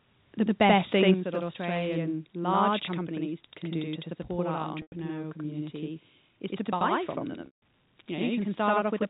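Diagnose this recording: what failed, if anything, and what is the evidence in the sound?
The whole recording is doubled. A second copy of the sound trails the first by about 85 ms, at the same level, like a tight slap echo. This is a channel delay (doubling) at the driver or buffer stage. One channel arrives late by a long buffer, which fits a 4096-sample buffer. The two channels are then summed to mono, so both copies sound together for the full clip.

From 1.08 to 1.11 s, the loudest peak turns harsh and crackly. Its tops are flattened, about 1 dB past the converter's limit, across a small share of the samples. This is likely microphone overload at the converter. The input gain was set too high, and the converter simply cut off whatever exceeded its limit. The crackle comes from those squared-off peaks.

At 1.14 s, right after that distorted peak, the sound and the background both drop by about 7 dB in one step. 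This is the microphone volume stepped down by call processing. The software likely detected the clipping and reduced the device's input gain in a single move. It did not ramp the change, so the new, lower level holds from that point on.

Packet loss with pitch repetition occurs twice, at the network stage. From 4.82 to 4.92 s, after "do to support our" and before "community is to buy", 100 ms is lost. That fits five 20 ms packets. At 7.46 s, after "to buy from them", 160 ms is lost. The receiver repeats the last pitch period to fill each gap, so the sound fades into silence. Audio resumes through a short cross-fade.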